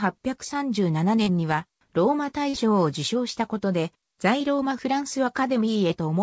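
This is call audio, band-limited to 8 kHz as a G.722 link would be. Short concealed packet loss hits twice, at 1.24–1.29 s and 2.49–2.55 s. About 20 ms, then 40 ms, arrived too late. The receiver patched each gap by extending the preceding sound, heard as a brief smear.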